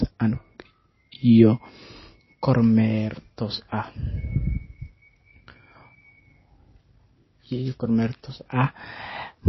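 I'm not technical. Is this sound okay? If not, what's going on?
No, not quite. The speech has a watery, swirly quality that runs through the whole clip. There is also nothing above about 5.8 kHz, so the treble is gone. The s sounds lose their crispness and can sound metallic. The cause is likely MP3 compression squeezed too hard. To save space, the encoder dropped the top frequencies entirely. It also discarded quiet details that flicker on and off from moment to moment, which makes the swirling sound.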